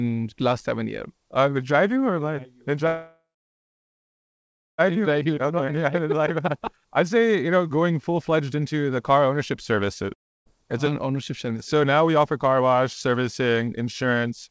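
From 2.87 to 4.81 s there is a call audio freeze: the last sound is stretched into a fading buzz that gives way to about 1.6 s of silence. The speech then resumes exactly where it stopped, so nothing is skipped. That is what separates it from a dropout. The likely cause is packets held up in transit until the jitter buffer ran dry.

From 4.91 to 5.30 s a jitter buffer speed-up follows. The receiver trims pitch periods to shed the built-up delay, playing at 111% with unchanged pitch. Roughly a twentieth of a second is cut, so the speech sounds briefly hurried rather than higher.

From 5.35 to 5.92 s the opposite happens in a jitter buffer slow-down. Repeated pitch periods add 62 ms, running the speech at 90%. Sounds are drawn out and may warble slightly, but the pitch stays the same, which distinguishes this from a simple playback-rate change.

Between 10.13 and 10.49 s comes a long network dropout. 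A short fading fill trails into about 0.31 s of silence, and the speech returns further on with 0.33 s of it gone for good. Unlike the earlier freeze, this gap is likely lost audio rather than delayed audio.

From 10.62 to 14.50 s a second jitter buffer speed-up runs at 107%, removing roughly three tenths of a second over its length. The rush is gentler but lasts much longer.

Throughout the clip, the call path's band limit leaves nothing above 8 kHz, which points to G.722 at 64 kbps.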